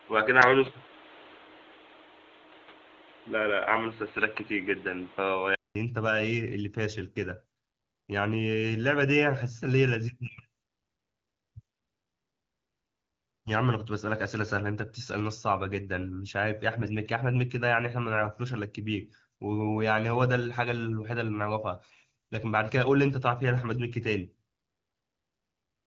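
From the start to 5.75 s the speech sounds dull and boxy, with nothing above 4.1 kHz and a noise floor about 30 dB down. This points to an input switched to a poorer device, likely. A 200 ms silence follows, then fuller sound about 5 dB different in level. On a spectrogram the top band is empty until 5.75 s. The waveform shows a flat gap and a step in level there. The AMR-WB coding at 12.65 kbit/s adds only light damage.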